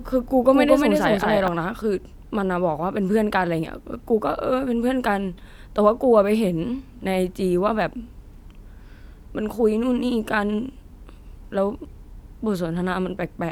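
A doubled audio track runs from the very start of the clip to 1.48 s, where the second copy cuts off abruptly. The speech is heard twice, with an equally loud, full-band copy trailing about a fifth of a second behind, dry and without any room colour. The likely cause is the same signal reaching the mix a second time through a slower path, leaving two copies out of step.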